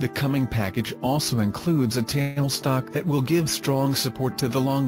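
At 2.21 s the audio stops advancing and is held by a fill of about 150 ms, a buzz or hiss that fades without reaching silence, then resumes where it left off at 2.38 s with nothing lost. This is a call audio freeze, likely from delayed packets emptying the jitter buffer.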